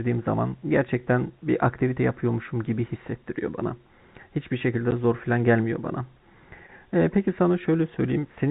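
At 4.91 s the speech drops out for 10 ms. This is packet loss filled with silence: a packet of audio never arrived, and the receiver played nothing in its place, so the gap length points to a single lost 10 ms packet. The hole is brief but abrupt, with hard edges. On the waveform it appears as a flat silent stretch with sheer cliffs on each side. On the spectrogram it shows as a thin vertical blank band. The narrowband G.711 telephone coding, with nothing above 4 kHz, carries on through the gap.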